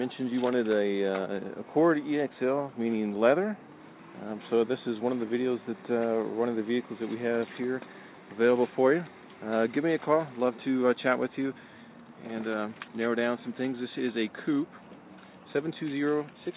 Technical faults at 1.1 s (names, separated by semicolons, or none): none